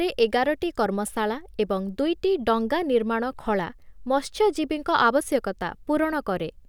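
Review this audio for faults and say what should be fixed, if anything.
Nothing in this speech recording needs fixing. No repair or reprocessing is called for.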